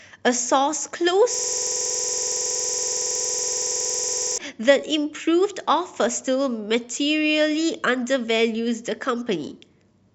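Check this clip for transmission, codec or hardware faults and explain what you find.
One hardware fault turns up. From 1.34 to 4.38 s the speech freezes into a rapid, machine-gun-like stutter at 21.5 Hz. This is a system hang loop: the driver stalled while the hardware kept replaying the same 46.4 ms ring buffer, about 65 times, which fits a 2048-sample buffer.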